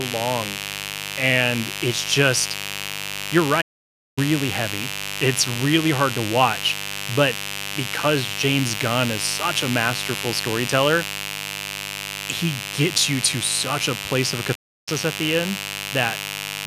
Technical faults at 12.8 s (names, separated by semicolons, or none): mains buzz